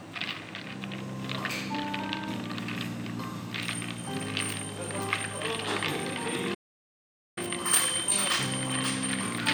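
At 6.54 s the sound halts mid-flow and the output stays silent until 7.38 s, a gap of about 0.82 s. This is a playback stall: the player most likely ran short of data or was blocked. Unlike a dropout, nothing is lost; the audio resumes where it stopped.

From 7.38 s to the end at 9.53 s comes time-compressed catch-up. The player works off its backlog by trimming and cross-fading small slices, so the audio runs about 1.1 times fast. Unlike a sped-up tape, pitch stays normal.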